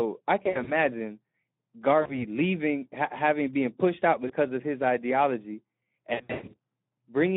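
Throughout, the Speex codec leaves the speech hoarse and noisy, confined to roughly 200 Hz to 3.6 kHz. There are too few bits for the excitation, a starvation consistent with about 11 kbps. At 0.43–0.74 s, 2.01–2.25 s, 4.27–4.33 s and 6.13–6.56 s, VoIP packet loss concealed by the speech codec stretches sound into a buzzy tone or coloured noise that fades. The decoder extrapolates from its last pitch and filter while lowering gain. The longest gap, 120 ms, falls in the final burst.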